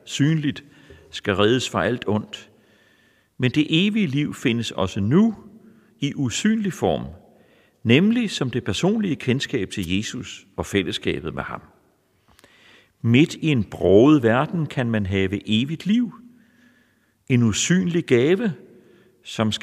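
At 9.82 to 9.86 s, right after "som det personlige kendskab", there is a wireless microphone noise hit. The radio link fades as reflected signals cancel. Receiver noise surges for about 40 ms. It sounds like a brief burst of static.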